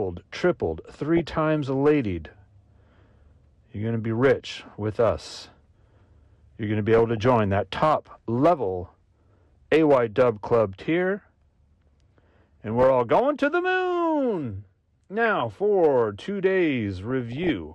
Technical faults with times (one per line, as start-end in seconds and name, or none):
0.00-17.75 hard clipping
0.00-17.75 MP2 compression
1.16-1.32 DAB burbling
6.98-7.26 DAB burbling
8.87-9.56 DAB burbling
11.87-12.84 DAB burbling
15.26-15.41 DAB burbling
17.08-17.50 DAB burbling